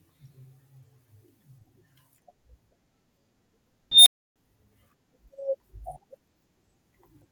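At 3.91 s an unstable filter runs away: a squeal near 4 kHz swells over about 0.15 s, clips, then drops into roughly 0.3 s of silence until 4.36 s. That abrupt cutout after overflow, rather than a sustained howl, separates it from acoustic feedback.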